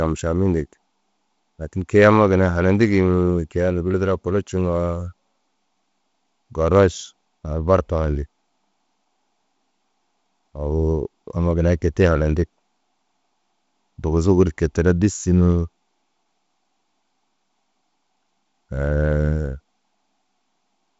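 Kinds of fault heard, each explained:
No faults can be heard in this speech clip. The sound stops at about 7.7 kHz and carries a light hiss and a slightly grainy lower band, which fits G.722 wideband telephone coding at a reduced rate such as 48 kbit/s.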